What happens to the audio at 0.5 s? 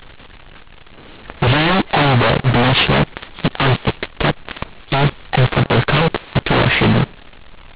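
At 0.5 s, as throughout, A-law telephone audio is decoded as mu-law, a mix-up that scrambles sample levels into harsh, distorted speech and lifts pauses into noise.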